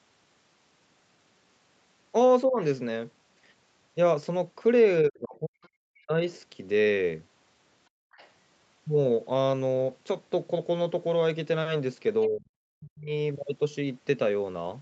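This is a speech clip with typical call echo-canceller trouble. The talker's speech gets pushed down three times: a brief dip of about 20 dB at 2.46 to 2.59 s, then deep drops of about 40 dB from 5.02 to 6.24 s and from 12.28 to 13.11 s. That's most likely speech suppressed in double talk, where the canceller can't separate the talker from the loudspeaker echo while both sides are active. There are faint scraps of the other side's voice leaking through at 5.63 to 5.67 s, 8.12 to 8.3 s and 12.22 to 12.28 s, sitting about 30 to 35 dB under the speech, with the likely cause being echo the canceller didn't fully remove. The background is gated by the echo canceller at 7.89 to 8.12 s, where the room sound falls about 38 dB for roughly a fifth of a second before coming back. Nothing is audible above 8 kHz, which fits the call's codec bandwidth.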